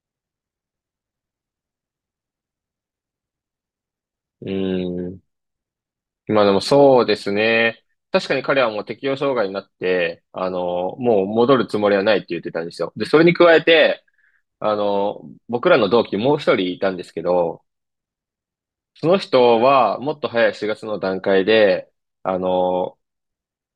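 No technical faults can be heard anywhere in the recording.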